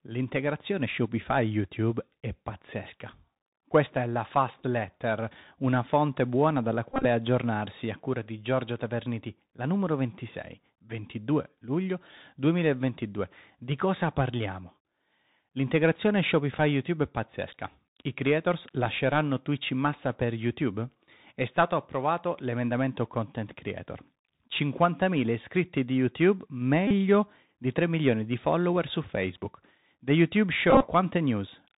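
The whole clip of speech carries the Bluetooth CVSD headset codec, and its damage is plainly audible. CVSD encodes one bit per sample, just up or down, with an adapting step, at a rate that fits the usual 64 kbps headset link. Everything above 4 kHz is gone, s sounds come out scratchy, loud bright bits distort where the step can't keep up, and a grainy hiss sits under everything.

Then there are four spots of Bluetooth headset packet repetition, where lost voice packets got filled by replaying the previous packet's bits. The first runs from 6.93 to 7.05 s, between "una fonte buona dalla" and "aggiornarsi a cura di". About 94 ms went missing, scattered across roughly 128 ms, with the longest stretch around 20 ms, so you get brief buzzy patches near 267 Hz from the 3.75 ms repeat. At 16.58 s only about 7.5 ms is lost, just a small tick. From 26.87 to 26.92 s about 34 ms repeats, giving a short buzz. 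From 30.71 to 30.87 s, 75 ms is lost over about 113 ms, with runs up to roughly 30 ms, for another buzzy stutter.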